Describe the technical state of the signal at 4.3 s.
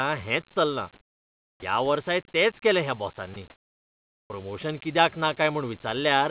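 At 4.3 s the sender's voice detector has likely judged the preceding stretch silent and stopped transmitting, so the receiver fills 3.5 to 4.3 s, about 800 ms, with comfort noise in place of the background. The real room noise gives way to a steady, featureless hiss about 2 dB quieter, lacking the texture of the surrounding background, and this lasts until the speech returns with "कित्याक ना".

Right at that return, the onset is clipped by the voice detector, which was likely slow to register that sound had resumed. The first 30 ms or so, from 4.27 to 4.3 s, were not sent, and synthetic noise plays where they should be. "कित्याक ना" therefore begins abruptly, without its soft lead-in, jumping straight out of the flat noise.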